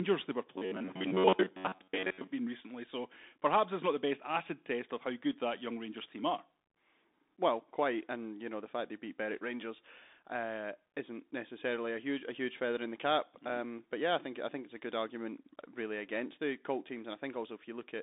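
Throughout, the speech sounds thin and boxed-in, with s sounds turned scratchy and a grainy hiss beneath everything. Nothing reaches above 3.8 kHz, and the band sits around 250 Hz to 3.7 kHz. This is the Bluetooth CVSD headset codec, whose one-bit up-or-down steps, which fit a 64 kbps link, can't keep pace with loud, bright sounds.

From 0.56 to 2.30 s the speech turns into a rigid, metallic buzz pinned at about 94 Hz. It is robotic sound from repeated short buffers. The likely cause is that the same slice of roughly 11 ms is replayed over and over while most of the real audio is skipped.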